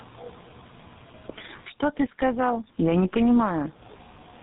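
Gain pumping runs throughout the speech: loud and soft parts end up closer in level and the sound is squashed, swinging by about 20 dB, likely from input gain set far too high and a fast limiter clamping it down.

Tandem speech coding is present across the whole clip: the speech is rough, muffled and warbly, with nothing above 3.8 kHz. This fits two low-rate speech codecs in series, a G.723.1 stage followed by GSM full rate, each re-coding the previous one's damage.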